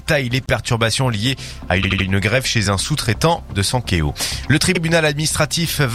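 Repeated frames stutter at 0.46–0.49 s, 1.82–2.05 s and 4.74–4.80 s. Compressed blocks of 26, 78 and 52 ms replay, the middle block three times. Spectrograms show identical adjacent slices.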